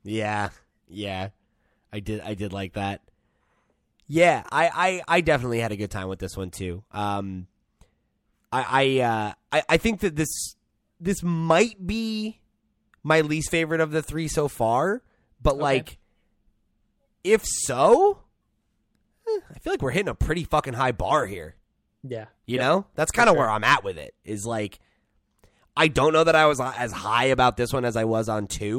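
No technical faults can be heard anywhere in the speech.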